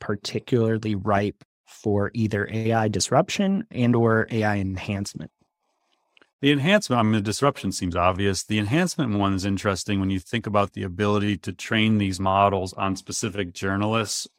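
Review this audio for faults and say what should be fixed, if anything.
Nothing here needs fixing, as no audible faults turn up anywhere in the speech. There are no events to time or trace, so no preventive step is called for.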